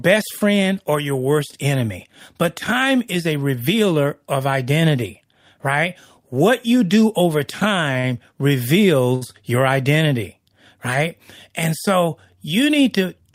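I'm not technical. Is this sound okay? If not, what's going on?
No. There are two short stalls from a late packet, at 7.93–7.97 s and 9.15–9.23 s. A piece of the speech arrived late, so the player held the last sound for 15 ms, then 63 ms, and resumed where it stopped. Nothing is lost, just briefly stretched.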